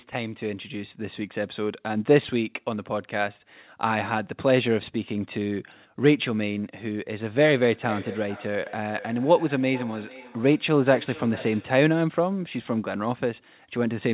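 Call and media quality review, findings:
Feedback echo between two devices, 7.4 to 11.81 s: speech comes back roughly every 0.4 s, thinner and ringier each pass, peaking at about 16 dB under the talker. Another device in the room replays this mic, and the local canceller can't remove it.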